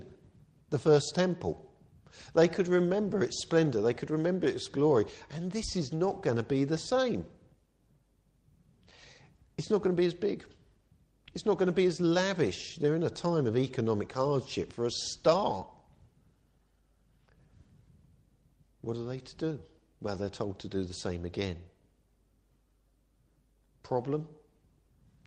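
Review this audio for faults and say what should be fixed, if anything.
No faults are present, so nothing needs fixing.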